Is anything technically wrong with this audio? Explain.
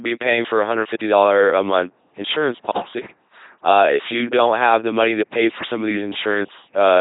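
Yes, there are two faults.

LPC-10 vocoder, throughout the clip: the speech has been squeezed through a vocoder at a rate that fits LPC-10's 2.4 kbit/s. It throws away the real waveform and resynthesises it with a simple vocal tract filter, driven either by a pulse buzz or by noise, switching between the two with nothing in between. The result is heavily damaged, mechanical, robotic speech, with stray buzz or hiss where the voiced/unvoiced choice goes wrong, and nothing above 3.8 kHz.

GSM signalling bursts, from 3.77 s to 5.90 s: a nearby 2G phone exchanging signalling with its network emits short clusters of radio bursts, and the audio circuitry rectifies them into sound. For those two seconds a galloping dit-dit-dit of brief buzzes at about 217 Hz rides under the speech. It sits roughly 30 dB below the speech.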